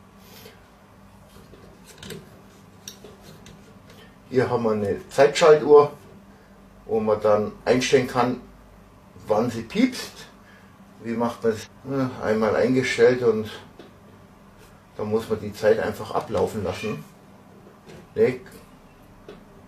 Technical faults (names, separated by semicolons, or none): stream segment skipped